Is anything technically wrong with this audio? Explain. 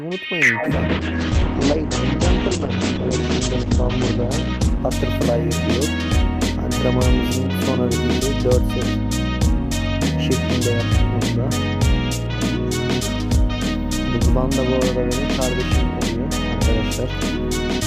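Yes. From 0.64 to 8.33 s there is a call bitrate drop. The encoder was starved of bits, consistent with a fall from around 96 kbps to 10 kbps, so the audio sounds coarse and watery, with the top end muffled from 20 kHz down to 8 kHz. The worst stretch lasts about 3.4 s.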